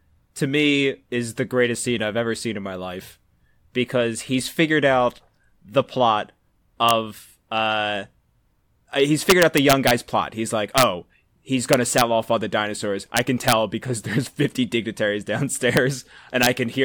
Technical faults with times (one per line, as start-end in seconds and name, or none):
6.89 integer overflow
9.30-9.91 integer overflow
10.78-10.83 integer overflow
11.73-12.01 integer overflow
13.17-13.52 integer overflow
15.77 integer overflow
16.43-16.46 integer overflow